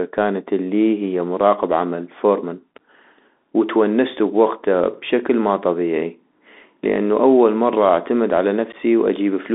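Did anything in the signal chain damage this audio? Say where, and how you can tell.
Yes. The damage starts at the codec stage. The audio went through a Bluetooth CVSD headset codec, which encodes each sample as a single up-or-down bit and adapts its step size to keep up. The sound matches a 64 kbps CVSD link. The speech is squeezed into a band of about 250 Hz to 3.6 kHz, with nothing in the upper range. Loud, bright passages distort where the step can't follow them, s sounds come through scratchy, and a grainy hiss sits under the speech for the whole clip.

The second fault is on the wireless link: unconcealed Bluetooth headset packet loss from 8.72 to 8.75 s. A few voice packets between headset and phone went missing, about 11.2 ms of audio in all. Nothing concealed the gap, so silence or an idle pattern filled it. You hear a short hole with hard edges, and right after it the speech returns briefly quieter while the CVSD step size builds back up.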